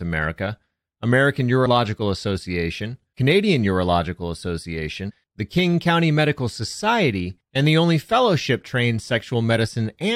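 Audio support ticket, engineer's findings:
Compressed frames skipped: decoder dropping whole frames, either missing or rejected as damaged. Speech jumps ahead about 50 ms at 1.65 s and about 70 ms at 5.09–5.11 s, consistent with two and three frames of roughly 23 ms.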